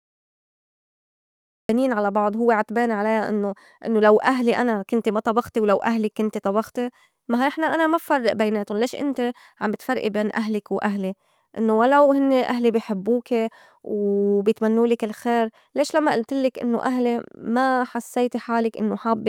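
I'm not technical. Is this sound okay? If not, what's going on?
No. There is a cut-off start: the first 1.69 seconds are complete digital silence, and then the speech jumps in abruptly at 1.69 s with "على بعض هوّ عتبان". The recording began late, so it caught the speaker partway through a sound. Instead of easing in naturally, the audio switches on suddenly, and whatever came just before that moment is simply missing.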